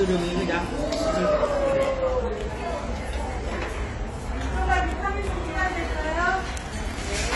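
Throughout the sounds, nothing is present above 11.5 kHz, and the top end has the smeared, thin quality of heavy coding. The likely cause is low-bitrate audio saved at a high bitrate: the high-rate MP3 keeps the losses of an earlier encode, which fits a low-rate AAC source near 32 kbit/s.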